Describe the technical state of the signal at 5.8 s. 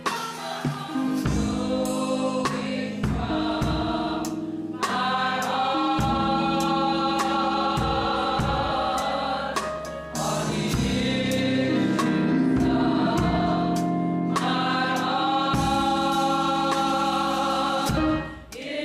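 At 5.8 s the signal is intact, with no audible fault at that point.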